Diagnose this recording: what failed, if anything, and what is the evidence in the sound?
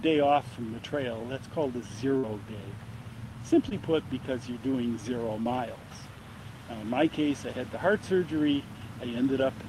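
Network burst of packet loss at 2.17 to 2.25 s: the last sound is stretched and fades for roughly 56 ms, then audio jumps ahead, skipping about 60 ms.

Two short concealed packet losses, also network, at 3.69 and 5.43 s: brief smears where around 20 ms went missing and the decoder extrapolated the previous sound before blending back.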